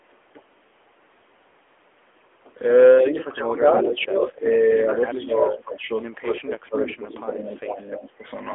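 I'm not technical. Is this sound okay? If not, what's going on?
No. Throughout, the voice sounds muffled, boxy and somewhat buzzy and artificial, with nothing above about 3.6 kHz. That is the AMR narrowband mobile codec, the older phone-network speech coding, which keeps only the low part of the voice and simplifies what's left.

From 3.0 to 5.97 seconds and again from 6.3 to 8.27 seconds, the voice sinks noticeably quieter and thinner in places. This is speech suppressed in double talk: most likely the call's echo canceller got confused when both people spoke at once and turned the talker down too.

At 3.56 to 4.3 s, 6.83 to 7.6 s and briefly at 7.95 to 8.0 s, a delayed copy of the voice trails about a third of a second behind. It is fairly loud at first and fainter later. This is an echo leak, likely from a speakerphone whose echo removal let some sound slip back.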